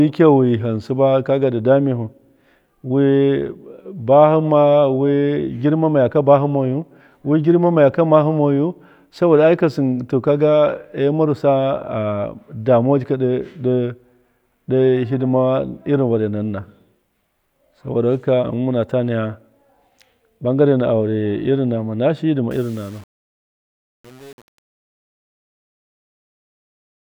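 In this speech clip, from 22.51 s to 27.17 s, just after "nama shiyi ndi ma", the fade-out turns gritty. This is truncation distortion on a fade: the fade stage drops low bits without dither, consistent with roughly 7-bit resolution, so the quiet tail collapses into square steps.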